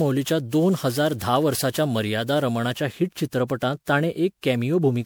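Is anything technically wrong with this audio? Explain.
Yes, there are two problems in this speech clip. Throughout, the sound is swirly, smeared and hollow, with soft, blurred attacks. That's likely generation loss: repeated MP3 decoding and re-encoding, around ten passes at something like 128 kbit/s, each requantising on a shifted frame grid so the noise and spectral holes pile up. Nothing makes it above about 20.7 kHz.

From 0.0 to 2.77 s there's pre-emphasis left on. The treble sits about 8 dB hot at 10 kHz relative to 1 kHz, which fits the CD 50/15 µs curve with no matching de-emphasis applied, so that stretch comes across thin, bright and sibilant.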